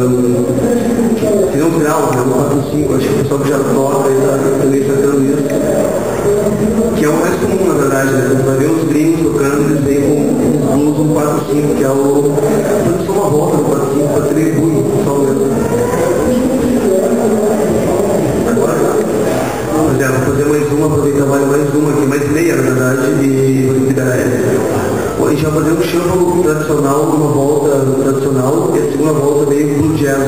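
From about 11.2 to 16.9 s the audio picks up periodic clock jitter, a rough, metallic edge laid over everything that's playing. What's happening is that something is wobbling the converter's sample clock at a steady rate of around 100 Hz, so every component of the sound grows sidebands roughly 100 Hz above and below it. The higher-pitched content suffers most, which is why the grit sits mostly up top.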